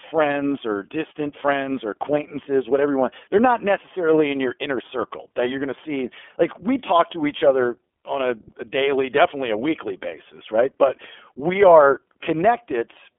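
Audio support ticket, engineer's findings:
iLBC codec throughout the speech: band-limited, nothing above 3.6 kHz, telephone band about 300 Hz to 3.4 kHz; plainly audible rough, synthetic texture. Excitation coded independently per 30 ms frame, which fits the 13.33 kbps iLBC mode.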